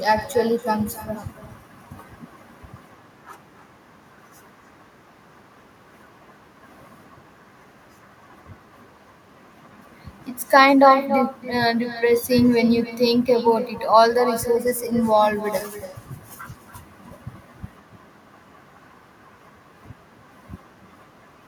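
With no echo canceller at the far end, the loudspeaker feed reaches the microphone there and is sent back unremoved. Through the whole clip, every phrase of speech returns roughly 300 ms later as a thinner copy about 11 dB quieter, trailing each syllable.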